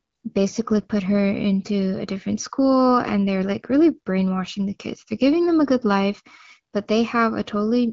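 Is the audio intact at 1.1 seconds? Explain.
Yes, the speech at 1.1 s is intact, carried cleanly through the AMR wideband (HD Voice) codec at 12.65 kbit/s with no fault at that moment.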